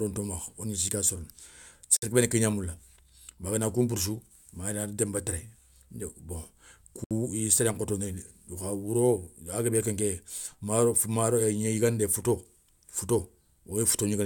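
At 1.97 s and again at 7.04 s the speech breaks off in a gap of about 56 ms and 65 ms, then resumes exactly where it stopped, the mark of a gap at a join of encoded pieces: leftover encoder start delay and end-frame padding. Unlike a dropout, nothing is lost, and the edges are smeared.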